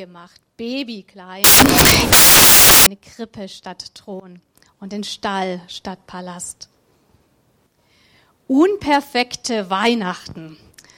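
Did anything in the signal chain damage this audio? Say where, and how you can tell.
Yes. From 1.44 s to 2.86 s the audio turns into loud, harsh broadband noise. That points to the sample-format conversion stage: samples built from the wrong bytes. The reader assembled each sample incorrectly, through a byte offset, swapped byte order or wrong alignment. The rapidly changing low-order bits then became the most significant part of every value. The result is broadband hiss at high level.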